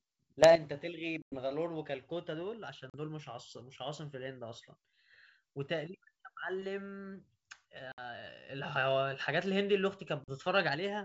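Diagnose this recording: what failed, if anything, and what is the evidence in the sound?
The first problem is a sudden gain jump, in the digital gain or call-processing stage. At 0.43 s the speech and the background noise step up together by about 10 dB until 0.56 s. From 8.49 to 10.75 s they're up by about 6 dB. That's likely a gain setting applied without a ramp.

The second is packet loss on an ADPCM call, at the network stage. There are hard-edged silent gaps at 1.22 s (100 ms), 2.90 s (40 ms), 7.92 s (60 ms) and 10.24 s (40 ms), each a few packets' worth. After each gap the decoder's predictor and step size are out of step with the sender's, so the speech comes back slightly distorted before settling. The G.722 wideband coding underneath at 64 kbit/s is working normally.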